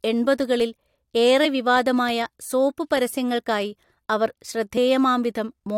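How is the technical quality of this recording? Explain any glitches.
The speech is marred by two brief glitches from damaged data in a compressed stream, at about 1.44 s, just before "വിവാദമായ സോപ്പ് പരസ്യങ്ങൾക്കായി", and at 4.76 s. Each is a short disruption. Corrupted data made the decoder misread those frames, lose sync and resume at the next valid frame header.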